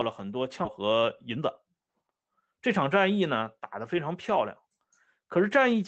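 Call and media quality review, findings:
Skip ahead at 0.65–0.67 s: about 0.7 s of audio missing, joined almost directly with no gap. Jitter buffer likely discarded queued audio on overflow, jumping playback forward.

Jitter buffer speed-up from 0.83 to 2.68 s: audio runs at 111% speed, same pitch, sounding hurried. Receiver trimmed short pitch-period pieces repeatedly, roughly 0.2 s in total, to reduce excess buffered delay. Opus call path audible as codec noise and band limit near 8 kHz, consistent with roughly 20 kbps.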